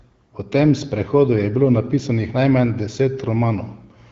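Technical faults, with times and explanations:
No technical faults can be heard in this speech recording. It carries the sound of the AMR wideband (HD Voice) codec at 12.65 kbit/s, with the band above 6.4 kHz filled with shaped noise and only light traces of the coding.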